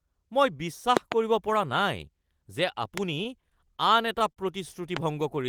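Between 0.97 and 1.14 s a loud pop arrives as a quick pair of sharp thumps standing about 20 dB above the speech, and single pops of similar strength follow at 2.98 to 3.00 s and, at about 15 dB, at 4.97 to 4.99 s. Each is most likely a voltage pulse from a plug, switch, static or driver glitch. Unlike a dropout, nothing is removed: the speech runs on unbroken beneath each pop.

From 3.15 to 4.39 s the audio shows repeated stalls (stutter): packets arrived late or too slowly, emptying the jitter buffer nine times. At each gap the receiver held the last sound, for 129 ms in total, about a tenth of that stretch, with the longest wait 40 ms. No speech is lost, which separates this from packet loss. The speech drags and catches instead of breaking off.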